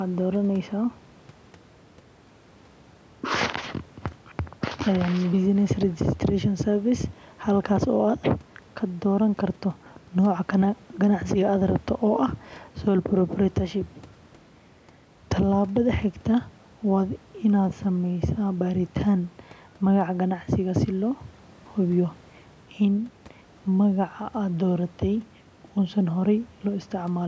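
No technical faults occur in this speech at any point; the call microphone processing it went through trims the lowest bass and leaves nothing above 8 kHz, which is expected for that path.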